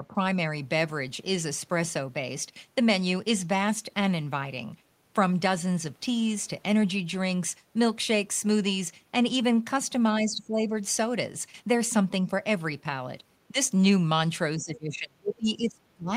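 The speech dips in level at 0.00 to 0.16 s, 10.20 to 10.74 s and 13.48 to 13.57 s, and from 14.58 s to the end it falls away by roughly 30 dB. This is likely speech suppressed in double talk: an echo canceller, hearing both ends at once, turned down this talker along with the echo.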